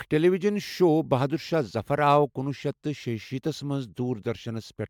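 The speech was likely run through MP3 encoding and decoding repeatedly, around five generations, each pass re-quantising on a shifted frame grid so the errors pile up. The result is generation loss across the whole clip: a swirly, hollow, smeared quality heavier than a single encode at this rate would give, with softened consonant attacks, and no content above about 19.9 kHz, which fits MP3 at roughly 140 kbit/s each time.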